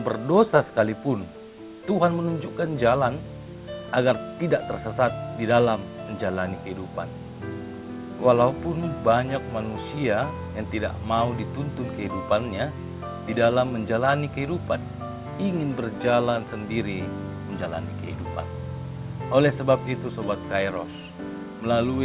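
No technical faults detected.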